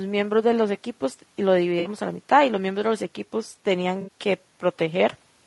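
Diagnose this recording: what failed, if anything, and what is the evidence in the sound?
The codec stage is at fault throughout. The speech sounds rough and grainy from start to finish. Noise fills the gaps between the harmonics, and the top band sounds thin and synthetic. This is low-delay AAC compression, likely AAC-ELD, at a rate that sounds like roughly 32 kbps. Its short frames cannot resolve pitch harmonics finely. At this rate the coder runs out of bits, so quantisation noise spreads across the spectrum and the highs are approximated.

The network or transport stage failed twice. AAC frame loss with concealment is heard at 1.79 to 1.89 s and again at 4.01 to 4.09 s. Each patch sounds smeared and noisy, with a phasey blur rather than silence. Each gap fits about three lost frames, roughly 60 ms of missing audio. The decoder rebuilt the gaps from the last good spectrum. It filled them with scrambled signs or interpolated energy. 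That keeps sound flowing but erases the detail.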